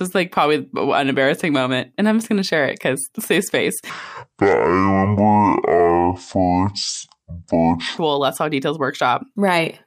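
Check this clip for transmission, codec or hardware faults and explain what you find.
One fault is present, in the speech.

Section at the wrong speed, from 3.90 s to 7.98 s, just after "because safe space". The passage plays at about 0.55 times its recorded speed, likely because this stretch was played out or resampled against the wrong clock. Slowing the playback stretches time and lowers frequency together, so the voice drops roughly ten semitones, sounding deep, dragged and sluggish. At 7.98 s it snaps back to its original pitch and pace.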